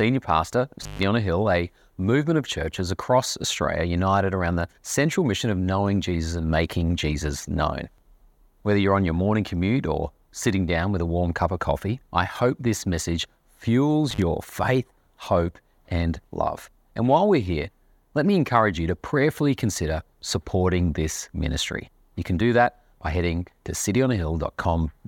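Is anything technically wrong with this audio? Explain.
Yes, the speech drops out twice from an intermittent contact, a loose plug or cable briefly opening the signal path. Between 0.82 and 1.03 s the line is open for about 143 ms, and between 14.11 and 14.22 s for about 48 ms. Each gap is bracketed by crackle as the contact breaks and remakes, with only faint hiss in between. On a waveform the signal collapses to near-flat with sharp spikes at the edges. A spectrogram shows thin vertical broadband streaks framing a near-empty band.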